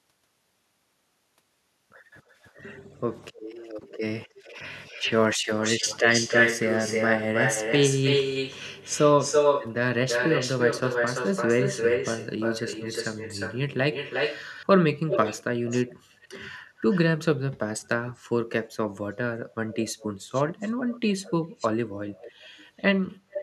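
Speech with echo leak in five stretches: a delayed copy of the talker returns at 2.28–2.53 s and 3.34–3.68 s (about 290 ms late, faint), 4.26–16.98 s (336 ms, roughly as loud as the speech itself), 18.15–18.23 s (381 ms, barely audible) and 19.73–23.43 s (402 ms, well below the speech). The likely cause is a far-end loudspeaker whose echo canceller failed to subtract what its microphone picked up.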